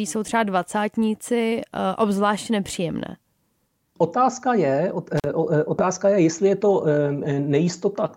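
Right around 5.18 to 5.26 s there's an intermittent contact fault, where a loose cable or plug briefly loses its connection. The speech drops out for about 43 ms, with crackle on either side of the gap and faint hiss while the line's open.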